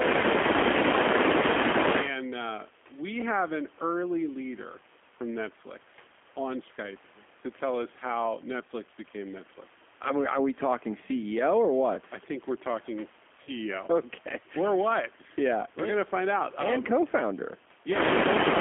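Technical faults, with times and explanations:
Throughout, G.729 codec: the speech is rebuilt at 8 kbit/s from a vocal tract filter, pitch predictor and a few pulses per frame, so it sounds rough and slightly synthetic. A spectrogram shows nothing above roughly 3.4 kHz and smeared, simplified harmonics.
13.43 to 13.50 s, VoIP packet loss concealed by the speech codec: about 40 ms of audio, which fits two lost packets, is replaced by the decoder stretching its last pitch and filter, giving a fading buzzy tone or coloured noise. The waveform shows repeated periods shrinking in level, and the spectrogram shows flat, frozen harmonics.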